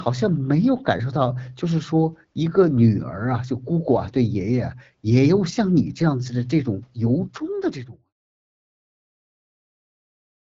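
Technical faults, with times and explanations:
No technical faults can be heard in this recording.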